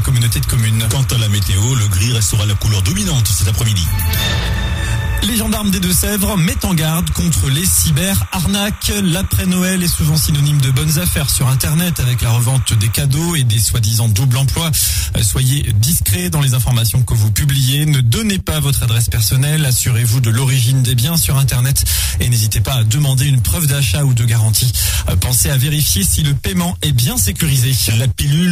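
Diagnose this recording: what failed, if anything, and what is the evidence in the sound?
Analogue wiring let linear timecode from a neighbouring track or cable leak into the path: timecode bleed. From 0.0 to 13.0 s a steady chirping warble sits roughly 25 dB below the sound, flipping between tones near 1 and 2 kHz, a rhythm fitting 30-frame code.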